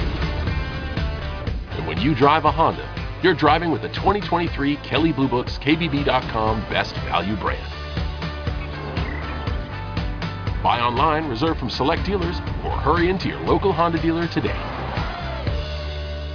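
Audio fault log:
Nothing here to log: I listened all the way through and didn't hear a single problem worth writing down.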